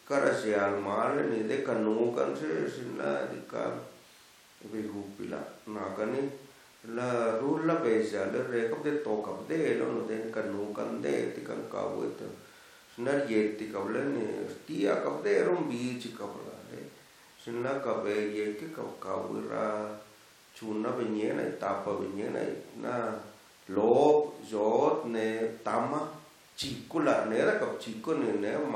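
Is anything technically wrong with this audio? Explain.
No, there is nothing technically wrong with this speech recording. No moment in it calls for any repair or correction.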